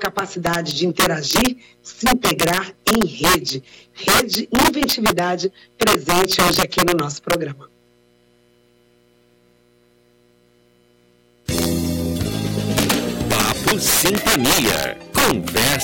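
Integer overflow runs throughout: with the signal driven about 11 dB too hot, a few percent of samples go over the limit and wrap to the opposite sign, producing harsh cracks, seen as large vertical jumps and broadband spectrogram streaks.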